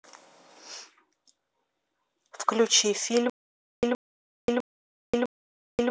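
Playback likely stalled at 3.30 s and kept retrying, so a 121 ms fragment of speech repeats four times every 653 ms, with 532 ms silent gaps, a stutter that lasts to the end.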